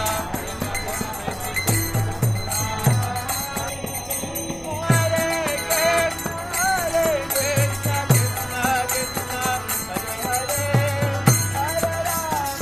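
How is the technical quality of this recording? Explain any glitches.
There is one glitch, a short stretch of channel delay (comb filtering) from 3.69 to 4.82 s. One channel lags the other by roughly a third of a millisecond. When the two are summed, their shared content cancels in evenly spaced notches, the first around 1.5 kHz. The sound turns hollow and phasey. A spectrogram would show dark horizontal stripes repeating up the spectrum for that stretch only.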